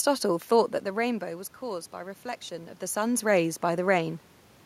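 No technical faults can be heard in this speech.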